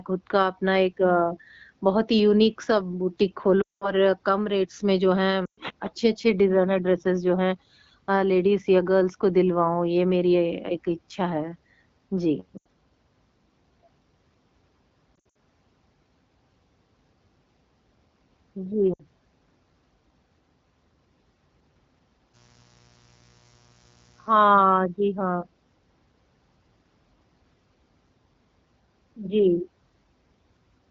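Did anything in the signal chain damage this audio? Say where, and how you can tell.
Yes. The radio link damaged this speech with lost AMR speech frames at 3.62 to 3.92 s, 5.45 to 5.60 s, 12.58 to 12.67 s, 15.16 to 15.37 s and 18.93 to 19.02 s. Frames failed their checksum, so the AMR-WB decoder kept repeating the last good pitch and vocal tract settings with falling gain. The longest gap, 200 ms at 3.62 s, drops to near silence within two frames. The 60 to 120 ms gaps drop to near silence within two frames. At 15.16 s, 140 ms of losses are scattered over 200 ms with runs no longer than 60 ms. The dip lengths point to whole 20 ms frames, and the voice comes back weak or rough for a moment after each gap.

In the analogue wiring, mains buzz appears from 22.32 to 24.49 s. It is a steady, raspy 60 Hz buzz about 35 dB below the speech. Its harsh edge comes from sharp switching spikes, from a dimmer, a rectifier or a missing shield, entering twice per mains cycle. 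Those spikes spread harmonics of 60 Hz up into the kilohertz range, and the codec passed them along with the speech.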